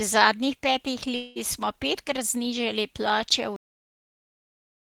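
At 1.15 s, just after "zadnjih petih", the speech gives way to a fading buzz-like continuation of the last sound for about 200 ms, and at 1.38 s it resumes at "smo petkrat znižali" with roughly 200 ms of speech gone. This is likely a long network dropout, with the receiver concealing the gap.

At 3.56 s the clip has a cut-off end. The speech stops mid-sound and drops straight to digital silence with no decay, because the final buffers were never written or played. Silence then runs to the end of the file.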